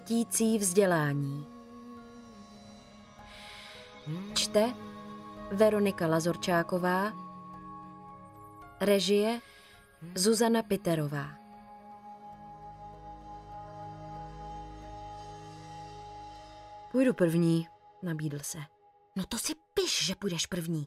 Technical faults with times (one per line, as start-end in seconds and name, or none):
none